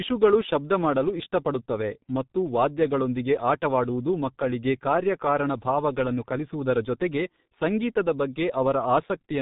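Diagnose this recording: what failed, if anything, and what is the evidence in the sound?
G.723.1 codec damage runs through the entire clip, a codec-stage fault. The speech has nothing above 3.8 kHz, so sibilants and fricatives lose their edge and consonants smear together, while a hoarse, buzzy texture sits on the voice. The damage is heavy and consistent with a bitrate near 6 kbit/s: the coder describes the voice with a coarse model refreshed only every 30 ms frame, so fine spectral detail and quick articulatory changes are discarded.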